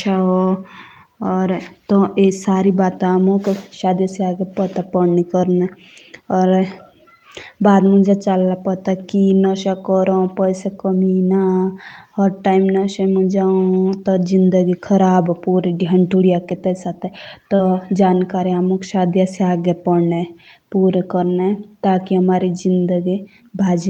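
At 0.45, 2.49, 8.29 and 12.81 s, then across 14.03 to 14.13 s, there is lost packet rebuilt from error correction. Each lost stretch was replaced by a low-bitrate copy carried in the following packet, so nothing drops out. Instead, 20 ms (60 ms at 14.03 s) turns briefly rough and noisy.

At 17.55 to 17.61 s comes a short concealed packet loss. About 40 ms never arrived, and the decoder extended the preceding speech to cover it, producing a smeared wobble rather than grit. Its final 20 ms, at 17.59 s, was again rebuilt from error correction, and the same occurs once more at 21.17 s.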